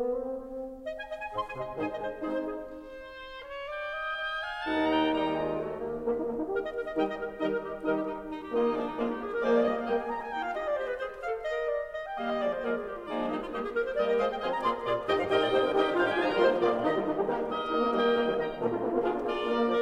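No technical faults are audible.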